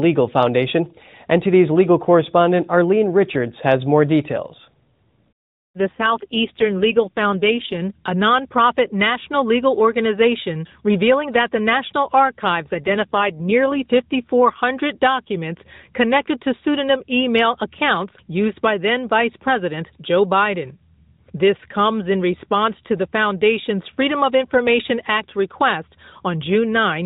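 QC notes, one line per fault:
5.79–7.81 s and 12.74–13.88 s, AMR rate drop: speech turns rough, buzzy and synthetic with no gap or bandwidth change, clearing before "a nonprofit national legal". The narrowband mobile codec stepped down a mode, which fits 12.2 falling to 5.9 kbps, leaving fewer excitation pulses per frame.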